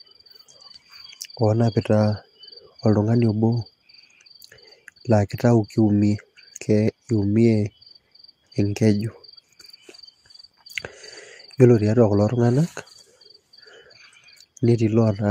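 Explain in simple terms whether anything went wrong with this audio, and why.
Nothing went wrong: the speech holds steady throughout, with no audible technical fault anywhere in the recording.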